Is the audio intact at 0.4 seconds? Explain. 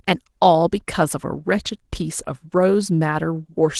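Yes, the speech is intact at 0.4 seconds, with no dropout, glitch or distortion at that point.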